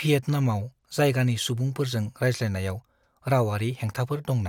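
Nothing in this speech recording points to a technical fault: the signal stays continuous and steady throughout, with no audible break, distortion or level problem.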